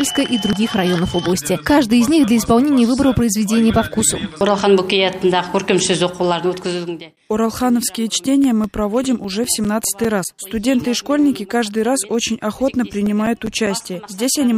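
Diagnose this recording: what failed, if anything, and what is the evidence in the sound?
CD scratch ticks point to a failure at the storage and playback stage, in reading the disc. From 8.44 to 10.85 s there are 13 ticks, about five a second, and from 13.06 to 14.07 s six more at a similar rate, the longest about 7 ms in the first run and 10 ms in the second. Each marks one turn of the disc past a blemish that error correction cannot repair, so the player interpolates or mutes. The steady rotation-locked spacing rules out irregular buffer underruns or packet loss.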